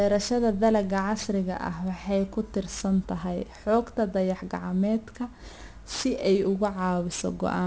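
Speech with aliasing throughout. The sibilants are gritty and metallic, with energy packed hard against 8 kHz, which fits a drop to 16 kHz sampling without an anti-alias filter. Plain band-limiting would only dull the sound, but here spurious folded tones sit about 20 dB below the speech.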